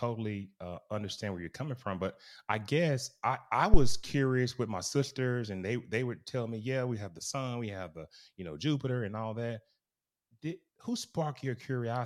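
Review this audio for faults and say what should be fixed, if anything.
Phantom power switching on a live input pushed a voltage step through the coupling capacitors, causing a deep phantom power thump from 3.74 to 4.08 s that peaks near -7 dBFS and decays within 76 ms.

Mute the channel or pull its fader down before switching phantom power on or off.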